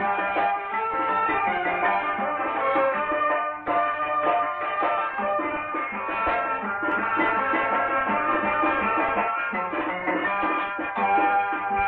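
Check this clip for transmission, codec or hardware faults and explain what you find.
One fault appears, a doubled audio track from 6.92 s to 9.28 s. During that stretch a second full-band copy of the sound runs roughly a third of a second behind the original and about 5 dB quieter, most likely because a slower path captures the audio a second time. It differs from echo or reverberation because the copy has no decay tail or room colouring, there is only one repeat, and it starts and stops abruptly at those two points.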